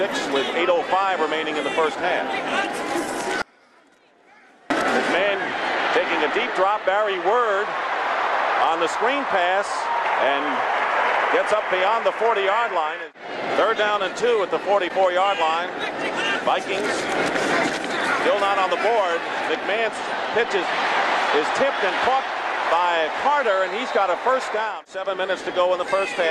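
An audio dropout to a faint residue runs from 3.42 to 4.70 s. The sound cuts abruptly for about 1.28 s, leaving only a faint leak roughly 30 dB down, likely a brief signal loss upstream while the path after the break stayed live.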